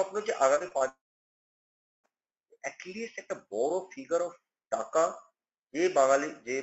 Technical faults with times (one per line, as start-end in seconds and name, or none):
0.55-0.82 repeated packet loss (robotic sound)
0.88-2.06 long network dropout